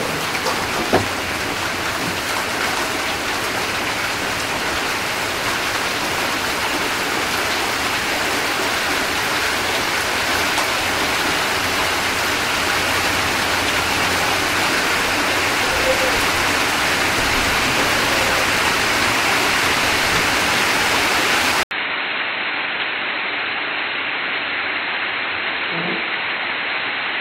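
A recording of sounds in which, at 21.63 s, the input most likely switched to a poorer device, which then carries the audio to the end. The change comes with a gap of about 80 ms. After it the band stops at 4.2 kHz, so the sound turns dull and boxy. The level falls by a few decibels, and a new, faint background noise sits well below the signal.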